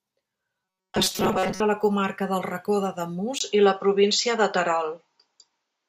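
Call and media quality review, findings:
Robotic sound from repeated short buffers, 0.65 to 1.60 s, ending just before "la comarca". Rigid metallic buzz at 188 Hz, likely a playout buffer starved of input that loops roughly 5 ms chunks and replaces most of the real audio. Fixed pitch separates it from codec warble.

Input switched to a poorer device, 3.39 s to end, after a 20 ms silence at the switch. Narrower band, new faint noise floor, level unchanged. Likely a capture-device change. A lasting band limit, not a transient, separates it from packet loss.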